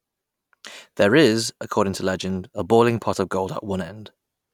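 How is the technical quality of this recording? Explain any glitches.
No technical glitches can be heard in this recording. The speech runs without any interruption or disturbance that would need explaining.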